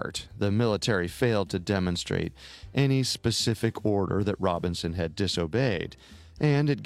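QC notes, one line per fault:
No faults found in the speech. The audio needs no fix or flag.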